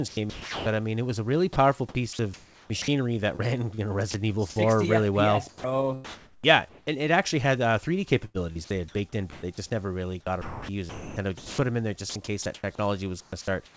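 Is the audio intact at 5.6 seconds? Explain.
No. From 5.49 to 5.64 s, speech gives way to flat hiss for 150 ms. This is likely sound dropped by the voice detector, which mistook part of the sound for background.

Comfort noise replaces the background from 5.49 to 6.87 s, just before "and it actually had". The sender likely paused transmission, and the receiver filled the gap with steady, featureless noise.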